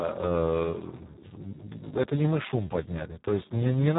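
Speex codec damage runs through the whole clip, from start to finish, and it is heavy. The CELP coder has very few bits left for the excitation signal, so the speech comes out hoarse, noisy and close to robotic. That fits a bitrate of around 4 kbps. Nothing is present above about 3.8 kHz, so the speech also sounds narrow and muffled.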